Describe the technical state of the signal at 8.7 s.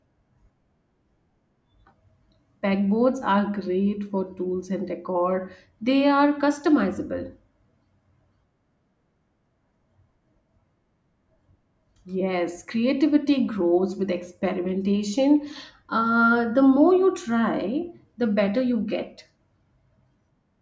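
At 8.7 s the speech signal is intact, with no technical fault present at that moment.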